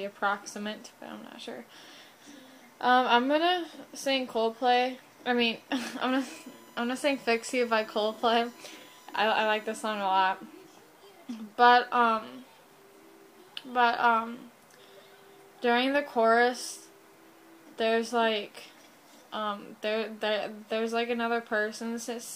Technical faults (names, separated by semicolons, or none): USB whine